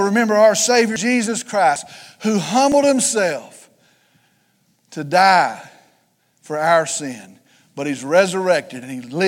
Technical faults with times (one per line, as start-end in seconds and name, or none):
0.96 dropped buffer (overrun)
1.76 dropped buffer (overrun)
2.72 dropped buffer (overrun)